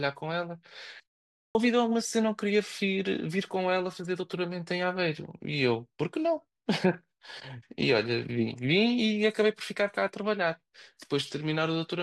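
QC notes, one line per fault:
1.38–1.55 s, clipped start after a pause: output wakes late after a 0.38 s gap, losing about 170 ms; waveform starts abruptly at full level.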